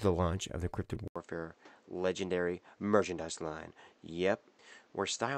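Speech recording where, at 1.08 s, an 80 ms gap leads into duller, quieter sound with a new noise floor, likely an input switched to a poorer device: the spectrogram cuts off sharply at 8.1 kHz, and the waveform drops roughly 5 dB.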